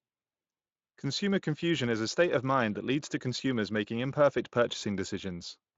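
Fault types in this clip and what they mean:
Nothing to list here: the speech just comes through a Speex link at a fairly roomy rate of about 24 kbps, and its top end stops around 7.6 kHz.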